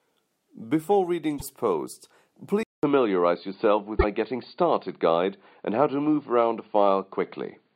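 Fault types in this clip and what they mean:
Broken MP3 bit reservoir: brief glitches near 1.37 s and 3.99 s, each roughly two 26.1 ms frames, where the speech jumps ahead. The likely cause is dropped frames whose borrowed data now reads the wrong bytes. A plain dropout would leave clean silence instead.
Input switched to a poorer device: at 2.63 s the speech stops for 200 ms and resumes dull and boxy, with nothing above 4.7 kHz, a level shift of about 5 dB and new background noise some 55 dB down. This is likely a switch to a narrower microphone, abrupt rather than a gradual filter.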